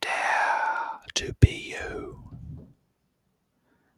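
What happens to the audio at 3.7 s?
From 3.57 s to the end at 3.97 s, the sound is cut by the noise suppressor. It mistakes the sound for noise and pulls it down, by up to about 11 dB.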